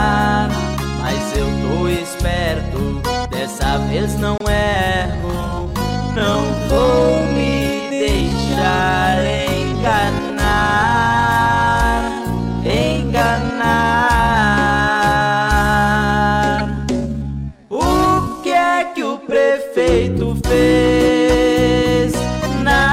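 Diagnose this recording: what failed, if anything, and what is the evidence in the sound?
The codec decoded damaged frames instead of concealing them, so misread gains and codes put energy at the wrong frequencies. There are short bursts at 4.38–4.41 s (about −15 dBFS), 12.08 s (about −20 dBFS) and 16.54–16.61 s, the loudest at about −5 dBFS and spanning several frames.

From 4.59 to 18.75 s the pace drops abruptly to 0.61 times normal speed while pitch holds steady. This is likely a time-stretched section from editing or playback software repeating short pieces to lengthen it.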